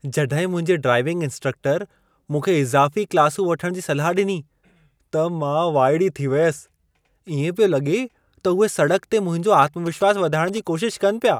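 Speech recording with GSM signalling bursts from 9.63 to 10.59 s, right after "ते मुंहिंजो". A nearby 2G phone's radio bursts are rectified, giving a galloping dit-dit-dit of short 217 Hz buzzes roughly 20 dB below the speech.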